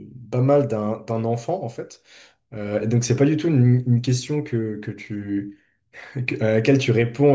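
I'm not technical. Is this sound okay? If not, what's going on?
Yes, nothing in this recording points to a technical problem with how the sound was captured, transmitted or played back.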